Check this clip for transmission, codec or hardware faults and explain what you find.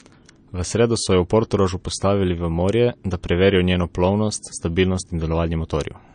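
One fault runs through the whole clip. It is likely MP3 compression, and the damage is plainly audible. Nothing sounds above 9.5 kHz, which fits a starved bitrate near 37 kbps. The encoder cut the treble and let weak frequency lines flicker between frames. The speech turns watery and swirly.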